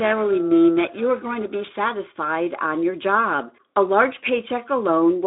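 Speech clip, heard through a narrow telephone-style band with nothing above about 3.8 kHz. From the start to 1.84 s it carries periodic clock jitter: interference wobbling the converter's sampling clock at around 1 kHz, placing sidebands roughly 1 kHz either side of every component. The result is a metallic, rough edge strongest on the brighter sounds. Unlike random jitter's diffuse hiss or Speex coding roughness, it has a fixed tonal spacing, vanishes in pauses, and stops at 1.84 s.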